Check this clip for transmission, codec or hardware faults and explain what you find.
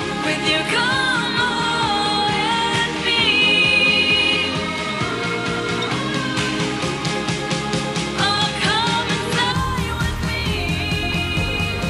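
One fault is present. From 0.00 to 9.52 s, the input has likely switched to a poorer device. That device passes nothing above 11.4 kHz, so the top end sounds dull. The level shifts by roughly 5 dB. A faint new noise floor sits far below the signal. The change at 9.52 s has no silent gap.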